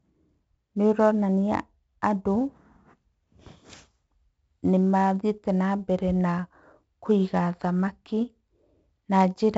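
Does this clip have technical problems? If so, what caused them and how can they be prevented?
Yes, 4-bit ADPCM compression runs throughout the speech. Each sample is coded as a coarse 4-bit step from a prediction, so heavy gritty hiss rides on every loud syllable and attacks distort. Nothing sounds above 7.7 kHz, which fits a low sample rate and a 64 kbps stream. To prevent it, record and deliver at full resolution, or use a modern perceptual codec at a higher sample rate.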